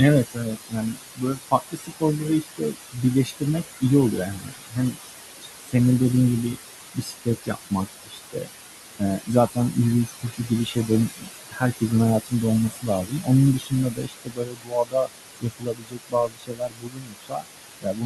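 Noise suppressor artifacts run throughout: the suppressor pulls the room noise, which sits only about 7 dB below the speech, down by about 19 dB between phrases, and the noise rises again under the words.

Speech cut by the noise suppressor occurs at 0.25–3.83 s, 4.17–4.98 s, 5.41–5.75 s, 6.94–8.5 s, 8.99–11.92 s, 12.25–15.1 s and 15.41 s to the end. Within each span, the suppressor mistakes quieter parts of the speech for noise and drops them by about 20 to 22 dB, so those stretches sound swallowed and faint.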